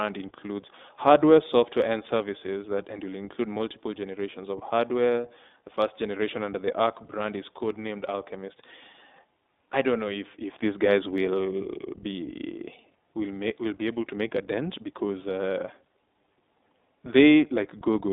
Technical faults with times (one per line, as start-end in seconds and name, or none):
0.00-18.12 iLBC codec
3.58-3.60 lost iLBC frames